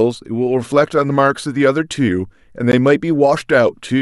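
A gap at a join of encoded pieces falls at 2.72 s, a gap of about 14 ms cutting into continuous speech before it resumes exactly where it stopped. The audio was evidently encoded in separate pieces and joined without trimming, so the encoder's start-up delay and the padding in the final frame of a piece both remain. The join recurs every 4 s, which points to pieces about that long. It sounds like a brief dropout whose edges are smeared by the codec.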